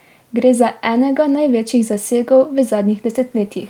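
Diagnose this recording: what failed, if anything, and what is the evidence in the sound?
Nothing in the recording points to a failure at any stage of the chain. There is no event in the speech that calls for a diagnosis.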